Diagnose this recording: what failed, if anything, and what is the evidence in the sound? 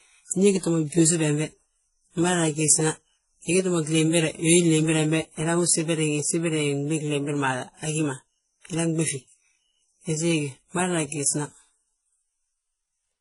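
Smeared, watery sibilance layered with a second grainy texture throughout, and nothing above 11.1 kHz. Codec stage: likely transcoding between lossy codecs, consistent with low-rate HE-AAC re-encoded to WMA.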